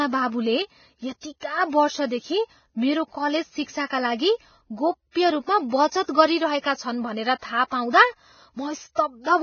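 From start to finish the speech sounds hissy and grainy, with nothing above 6.6 kHz and rough, smeared consonant onsets. The cause is likely heavy Vorbis compression, which fits a very low bitrate of roughly 17 kbps, where coarsely quantised treble turns into noise.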